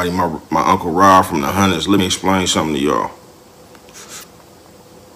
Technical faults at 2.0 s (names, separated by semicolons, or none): damaged data in a compressed stream